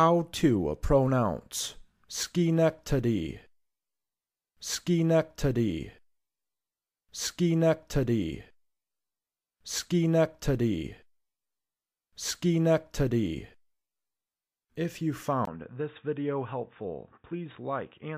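Right at 15.45 s there's a brief gap of about 20 ms, and from there to the end the sound goes duller and boxier, with nothing above 3.8 kHz. It also drops by about 5 dB and picks up faint new background noise sitting well below the signal. That combination is likely an input switched to a poorer device mid-recording, something with a narrower band, its own tone, and its own noise floor.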